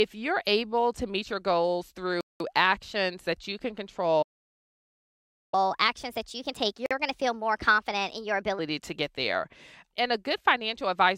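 At 2.21 s, right after "to meet your goals", the speech drops out for about 194 ms. It resumes at 2.40 s with "actions that you can". This is a Bluetooth stall. The likely cause is radio interference delaying packets to the headphones. Their small buffer emptied, so output went silent. Once the resent packets arrived, playback continued. It sounds like a short, clean gap, not a click or a burst of noise.

After "actions that you can", a playback stall begins at 4.22 s. The output goes silent for about 1.3 s. The player most likely ran short of data, or its audio thread was held up. Nothing reaches the output until it recovers at 5.54 s. The gap is long enough to break the flow of the speech. It resembles an abrupt freeze, not a fade.

Catch-up at higher speed follows from 5.54 s to 8.59 s. The player works through its backlog by resampling at 1.25 times normal speed. Because resampling shifts speed and pitch together, the voice rises by roughly four semitones. 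It sounds hurried. Normal speed and pitch return just before "to get there".

Within that fast stretch, at 6.86 s to 6.91 s, another Bluetooth stall cuts the sound for about 46 ms. The likely cause is again delayed packets. It is heard as a brief tick of silence inside the sped-up speech.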